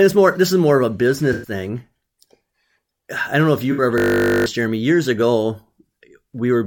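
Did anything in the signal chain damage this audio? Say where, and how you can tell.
Yes. At the codec stage, AAC frame loss with concealment occurs twice: after "is more of a" at 1.33–1.51 s, and after "I don't know if" at 3.72–3.82 s. The decoder rebuilt the missing frames from the last good spectrum, so both patches sound smeared and phasey. A spectrogram shows blurred, noise-like bands with the harmonic detail washed out.

From 3.98 to 4.46 s, a system hang loop points to the driver or buffer stage. The hardware replayed one 20 ms chunk 24 times, which produces a steady 50 Hz buzz. The waveform shows identical cycles repeating, and about half a second of audio is lost.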